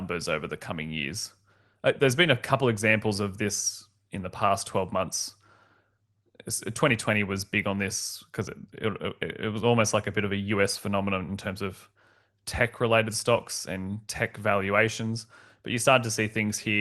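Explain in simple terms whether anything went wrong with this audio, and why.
Nothing went wrong here.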